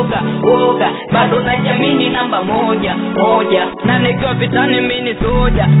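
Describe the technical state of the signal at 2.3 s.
At 2.3 s the signal is intact, with no dropout, glitch or other fault, only the steady narrowband character of the call path, which carries nothing above 4 kHz.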